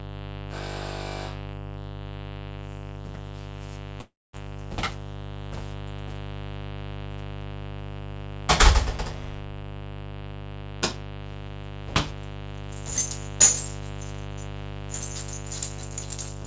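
A mains buzz runs through the whole recording of sounds, fairly loud at roughly 10 dB below the sound itself. It is built on 50 Hz, but sharp switching spikes from something like a dimmer, rectifier or unshielded lead arrive twice per cycle, so its harmonics climb into the kilohertz range, limited here by the call codec's cut-off at 8 kHz. That spread makes it raspy and edgy. A clean earth-loop hum would be a smooth, low tone.

From 4.01 to 4.36 s the audio breaks off. The last sound is stretched into a fading buzzy hiss, then about 230 ms of near-silence follows, and the sound resumes with roughly 330 ms of material simply gone. This is likely a long network dropout, with the receiver concealing the gap by extending what it last had. A brief packet-loss glitch would be a single click or warble of a few milliseconds. This gap lasts a third of a second, and the audio comes back further along rather than where it stopped.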